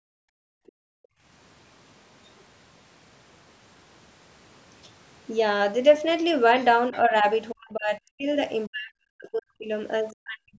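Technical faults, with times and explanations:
0.00–1.23 s, background gated by the echo canceller: room sound dips by about 40 dB for roughly a second while the canceller clamps the microphone during loudspeaker playback.
0.67–0.72 s, 2.38–2.43 s and 6.59–6.98 s, other side's voice leaking through: faint scraps of a second voice, roughly 25 to 40 dB under the talker, likely leftover loudspeaker echo.
6.91–8.27 s, 8.68–9.70 s and 10.12 s to the end, speech suppressed in double talk: the voice drops out in pieces, around 40 dB deep, likely the canceller muting both sides during overlap.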